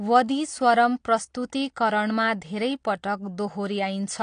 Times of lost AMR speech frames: none

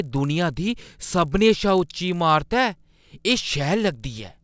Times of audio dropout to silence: none

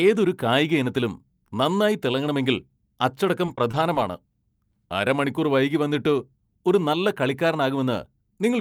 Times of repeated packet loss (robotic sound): 3.45-3.97

